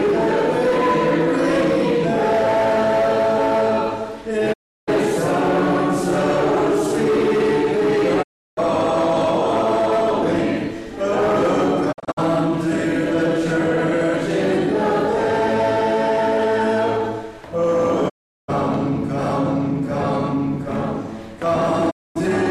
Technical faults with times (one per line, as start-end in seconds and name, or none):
4.52-4.89 digital broadcast dropout
8.21-8.59 digital broadcast dropout
11.91-12.19 digital broadcast dropout
18.08-18.50 digital broadcast dropout
21.89-22.17 digital broadcast dropout